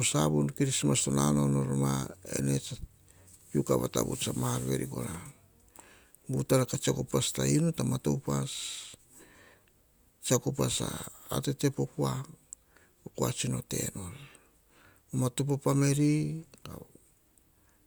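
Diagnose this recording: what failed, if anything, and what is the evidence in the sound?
Nothing failed; the speech carries no audible fault anywhere.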